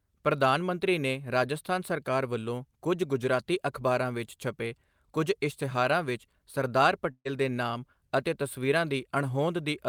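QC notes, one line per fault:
7.11–7.27 s, burst of packet loss: just after "ਵਿੱਚ ਸਰਦਾਰ", a run of packets failed to arrive in time, so the receiver extended the last received sound for about 135 ms, letting it decay into a held, fading tail that ends in about 60 ms of silence. Playback resumes at "ਦੇ ਨਾਮ ਅਤੇ ਤਸਵੀਰਾਂ", with about 140 ms of the original speech missing.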